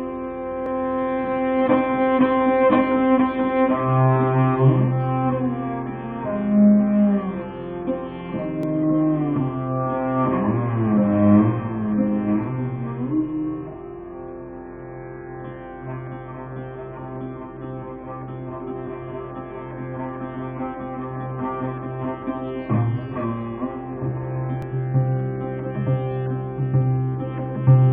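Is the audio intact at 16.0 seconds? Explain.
Yes, the audio at 16.0 seconds is intact, with no dropout, click, distortion or other fault at that point.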